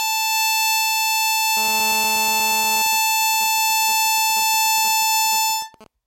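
GSM phone buzz runs from 1.57 to 2.82 s in this music clip: a hard, raspy 217 Hz drone, rich in harmonics and about 14 dB below the music, with no relation to what is playing. A 2G phone close to the equipment was in a call, its transmitter pulsing 217 times a second, and the audio circuitry rectified those radio pulses into a steady audible buzz. GSM signalling bursts follow from 2.86 to 5.87 s, even ticks with a longer 217 Hz buzz twice a second, sitting roughly 20 dB under the music. A phone was still on a call, but with its user silent it sent only short groups of radio bursts instead of continuous transmission. The audio path demodulated each group into the ticking pattern heard there.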